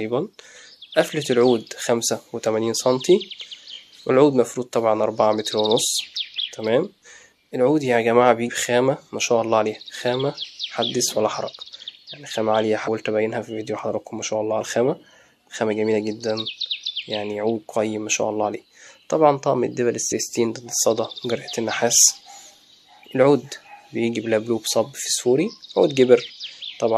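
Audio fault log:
12.87 s and 20.11 s, compressed frames skipped: the decoder lost or rejected a short run of compressed frames, so playback jumps ahead by about 70 ms, which fits roughly three 23.2 ms frames.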